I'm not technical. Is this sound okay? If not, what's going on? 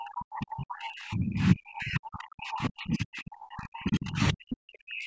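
No, not quite. From 0 to about 5.1 seconds the voice keeps dipping way down, sometimes nearly vanishing. That's most likely speech suppressed in double talk: the call's echo cancelling mistook this talker for echo while both sides spoke, and turned everything down.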